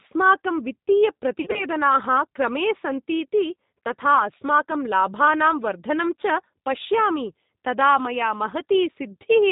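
From start to finish the speech carries the sound of the G.729 codec, plainly audible here and consistent with an 8 kbit/s G.729A stream. The decoder rebuilds each 10 ms frame from a vocal tract filter, a pitch predictor and a few sparse pulses, so nothing above 4 kHz survives. The result is a narrow, slightly rough, synthetic quality, with sibilants dulled.

Between 1.41 and 1.65 s there is VoIP packet loss concealed by the speech codec. About 80 ms of audio is missing, scattered over a 120 ms stretch, with the longest gap 40 ms, which fits eight lost 10 ms frames. Across each gap the decoder repeats its last pitch and filter at falling gain, stretching the sound into a brief, fading fill. Because each frame depends on the previous one, the speech stays weak and smeared for a moment after the packets resume.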